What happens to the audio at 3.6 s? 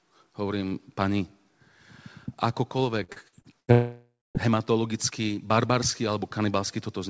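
At 3.6 s the speech falls inside repeated packet loss (robotic sound), lasting from 3.04 to 3.71 s. Five gaps, the longest 75 ms, are each patched by extending the preceding sound, filling 36% of that span. Unlike a single dropout, the holes keep recurring, so it sounds choppy.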